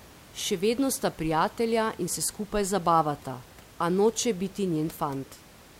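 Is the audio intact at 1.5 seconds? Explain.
Yes, the audio is intact at 1.5 seconds, with only the room's own background noise sitting about 24 dB below the speech.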